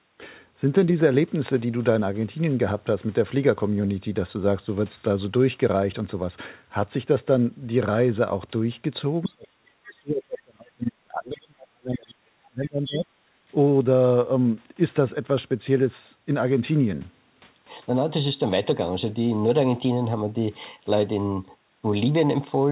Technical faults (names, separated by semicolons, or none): other side's voice leaking through; speech suppressed in double talk